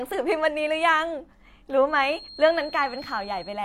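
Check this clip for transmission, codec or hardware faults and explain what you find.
Two faults are audible in this speech clip.

From 1.86 s to the end, a feedback whistle appears. It is a thin, steady tone at 4.2 kHz, sitting around 20 dB below the speech. Its level swells and fades slowly but never builds up. The likely cause is a loudspeaker-to-microphone loop held just at the edge of feedback. Gain around the loop is close to unity at that one frequency, so the tone keeps ringing without running away.

From 2.23 to 2.29 s, there is damaged data in the compressed stream. For about 60 ms the sound breaks into a brief chirp or squawk. Here the bitstream itself was corrupted. The decoder could not read those frames correctly and lost sync. It then skipped ahead to the next valid frame header, causing the glitch.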